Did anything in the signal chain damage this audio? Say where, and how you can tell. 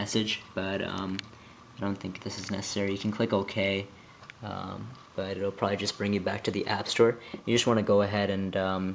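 No, nothing in the signal chain damaged this audio.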